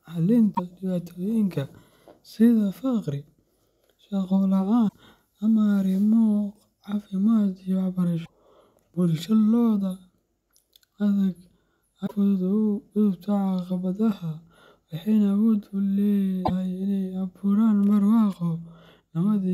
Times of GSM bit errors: none

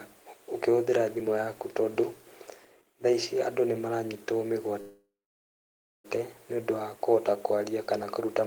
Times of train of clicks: none

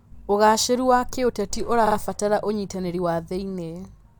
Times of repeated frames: 1.86-1.95

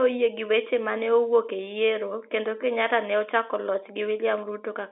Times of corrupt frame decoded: none

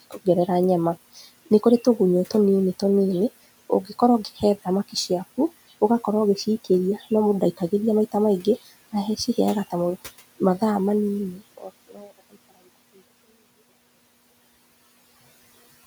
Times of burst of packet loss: none

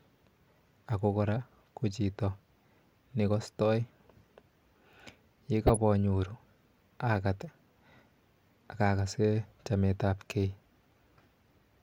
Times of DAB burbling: 5.67-5.80

